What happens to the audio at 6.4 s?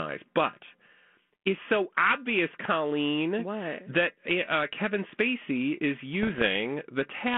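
Bit errors on an ADPCM link hit the audio from 6.22 to 6.47 s, at a rate of roughly a few bits in a thousand. Each flipped bit throws the decoder's step size and prediction off, and the mistake carries into the next few milliseconds instead of staying on one sample. Across that quarter second the speech, carried in the narrow telephone band of G.726 at 32 kbit/s, breaks into pops and rough, gritty bursts with brief jumps in level.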